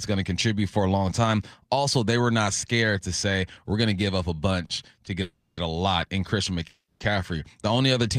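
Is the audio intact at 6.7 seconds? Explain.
No. From 6.67 to 7.02 s a call audio freeze stretches the last sound into a fading buzz or hiss, then 110 ms of silence. Delayed packets likely emptied the jitter buffer. Speech resumes where it stopped, with nothing lost, but 330 ms late.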